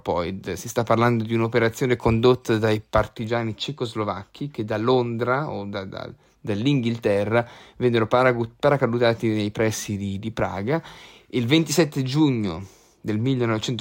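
No audible technical faults.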